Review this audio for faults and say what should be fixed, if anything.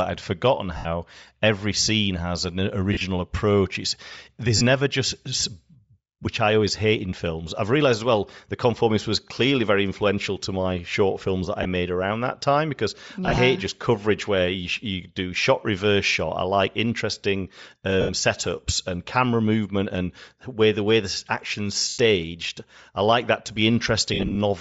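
The whole speech clip has a breathy, grainy top end that's plainly audible, and it's likely Bluetooth LC3 compression. The codec cuts the audio into 10 ms transform frames, and at a rate that fits something around 32 kbps it can't afford the upper spectrum. It zeroes much of it and fills the gaps with noise, which gives the sibilants and brighter parts that sandy edge. To prevent it, run the link at a higher LC3 bitrate or use a better-quality LE Audio configuration.

There are also lost LE Audio frames, eight bursts of them. They fall at 0.77–0.87 s, 2.93–3.01 s, 4.57–4.62 s, 11.63–11.65 s, 13.26–13.38 s, 18.01–18.11 s, 21.89–21.98 s and 24.14–24.37 s. The decoder is replaying the last good spectrum with scrambled phase, which fits lost stretches from 20 ms up to about 120 ms. At 2.93 s, 13.26 s and 24.14 s the dropouts come in scattered clusters, not as one solid hole. The 24.14 s one is the largest, with its longest unbroken run around 50 ms. 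To prevent it, fix the radio link by moving the devices closer, reducing 2.4 GHz interference, or adding retransmission headroom.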